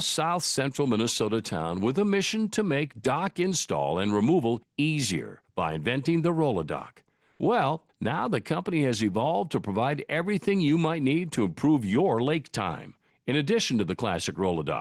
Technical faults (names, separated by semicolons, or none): comfort noise in place of the background